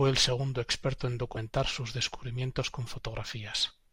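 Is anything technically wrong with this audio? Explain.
Yes. From 1.34 to 1.37 s, between "el segundo experto en" and "sus descubrimientos", a brief glitch. Damaged data in a compressed stream breaks decoding until the decoder resyncs at a later frame.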